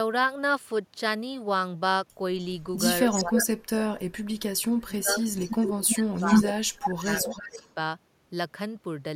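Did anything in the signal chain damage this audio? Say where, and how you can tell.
Yes, the damage sits in call processing. Echo leak: a delayed copy of speech comes back at 3.09–3.43 s, 4.58–4.62 s, 5.34–5.83 s, 6.15–6.49 s and 6.80–7.68 s. The delay is a steady 299 to 316 ms, creeping slightly later, and the level swings from roughly 40 dB below the direct speech to slightly above it. A fixed, discrete repeat points to a far-end loudspeaker path that the echo canceller likely failed to cancel, not room reverberation, which would decay smoothly.

Speech suppressed in double talk: the talker's own level drops by up to roughly 30 dB across 3.15–4.33 s, about a second in total, and by up to roughly 25 dB across 4.70–7.76 s, about two seconds in total. Both spans overlap the leaked echo, so the suppressor likely clamped down while both sides were active. Network dropouts would leave abrupt gaps.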